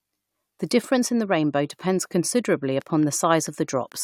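Interference from nearby equipment or a faulty connection is the likely source of a train of clicks from 2.82 to 3.93 s: about seven evenly spaced pulses at 4.5 per second, ticking over the speech at roughly the same level as the voice.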